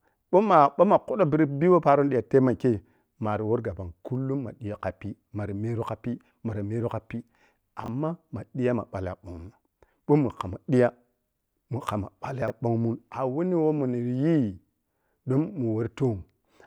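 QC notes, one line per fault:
7.84–7.88 s and 12.42–12.50 s, chunks out of order: a 20 ms piece of speech plays one chunk late at 7.84 s and three chunks late at 12.42 s, so the sound briefly jumps forward then back, heard as a tiny jumbled stutter. On the waveform, the cycles don't line up across the three joins. On the spectrogram, there are thin vertical broadband streaks where the harmonic lines break and resume out of sequence.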